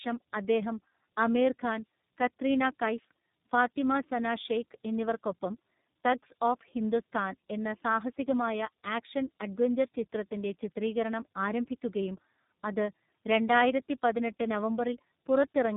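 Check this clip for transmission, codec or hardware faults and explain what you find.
One fault is present across the whole clip. Tandem speech coding, throughout: two speech codecs in a row, likely AMR-NB then iLBC, the second re-coding the first's degraded output, leaving rough, muffled, warbly speech with nothing above 3.8 kHz.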